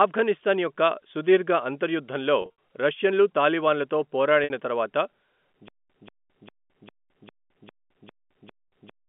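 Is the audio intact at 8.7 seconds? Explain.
No. At 8.7 s the sound falls inside a stutter with silent gaps running from 5.68 s to the end. A 186 ms burst repeats every 0.40 s with 215 ms of dead silence between, which likely comes from a stalled stream replaying its last fragment. Unlike a glitch, it keeps an even pace.

Within that, packet loss with pitch repetition covers 8.68 to 8.72 s. The 40 ms hole, consistent with two lost packets, is bridged by a repeated pitch period that sounds like a brief buzzy hold rather than a replayed burst.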